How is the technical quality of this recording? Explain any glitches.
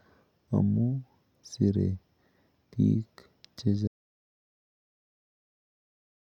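The recording has one clear fault: an audio dropout to silence from 3.88 s that runs to the end of the clip at 6.39 s. The speech stops mid-flow and nothing replaces it, not even room tone, so the last two and a half seconds are dead silence. The likely cause is a lost input, such as a disconnected device, failed link or mute, while recording carried on writing silence. On a waveform the trace collapses to a flat line; a spectrogram goes fully blank.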